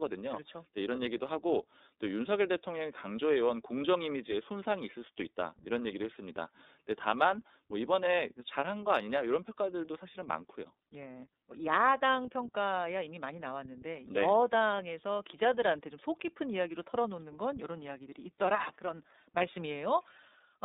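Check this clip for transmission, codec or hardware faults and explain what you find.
Two faults are present: the whole recording has passed through the iLBC codec, and two single frames of that stream were lost in transit.

The iLBC codec is applied throughout. The speech was squeezed into a narrowband VoIP channel, so the band runs only from about 250 Hz to 3.7 kHz. Its frame structure and rate fit iLBC's 30 ms mode at 13.33 kbps. Each frame's excitation is coded on its own with few bits, so the damage is plainly audible: the speech sounds muffled, slightly rough and synthetic, with no air or sibilant detail above the cutoff.

Lost iLBC frames occur at 0.96–0.99 s and 19.37–19.42 s, about one 30 ms frame each time. With the packet missing, the decoder concealed the gap by repeating the last pitch cycle blended with noise. Each dropout sounds like a brief held, faintly buzzy vowel. Because every iLBC frame decodes independently, the speech snaps back to normal right after each gap.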